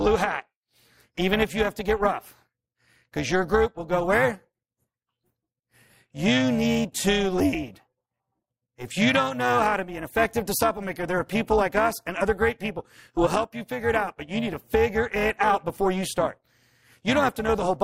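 Overlap-add ripple runs through the whole recording, from start to finish. The speech appears to have been split into windowed frames and reassembled with an overlap whose window gains fail to add up to a steady level, so the loudness dips and recovers once per frame. The swing is about 11 dB at a rate of around 400 Hz, fast enough to sound less like tremolo than a buzzy, robotic roughness laid over every syllable.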